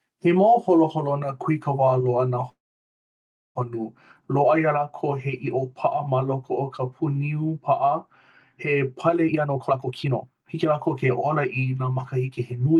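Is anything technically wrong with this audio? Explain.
Yes, two faults are audible in this speech clip, which travelled over a WebRTC call path with Opus coding and a high-frequency limit near 12 kHz.

From 2.49 to 3.57 s there is a call audio freeze. Packets were likely held up in transit, so the jitter buffer emptied and the receiver had to fill about 1.06 s on its own. It stretched the last sound briefly, then left about a second of silence. Nothing was lost. The speech resumes where it stopped, just later, adding about 1.06 s of delay.

From 9.29 to 12.76 s there is a jitter buffer speed-up. With the buffer holding more than it aims for, the receiver trimmed short pitch-period slices repeatedly to bring the delay back down, cutting roughly a second in total. Speech here plays at about 128% of normal speed while keeping its pitch, so it sounds rushed rather than higher.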